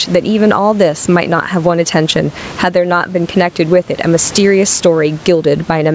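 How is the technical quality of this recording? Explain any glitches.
The recording has one real problem: gain pumping, running the whole way through. The gain swings by around 15 dB. The likely cause is mic gain set far too high, with a fast limiter or compressor slamming it down on each loud peak. That squashes loud and quiet parts together and leaves the speech sounding squashed.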